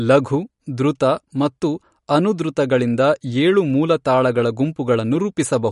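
From start to finish the speech carries plainly audible damage that points to MP3 compression as the likely cause, at a starved rate that fits roughly 48 kbps. With bits that scarce the encoder keeps dropping weaker frequency components from one frame to the next, which gives the whole thing a watery, swirly texture and softens the onsets.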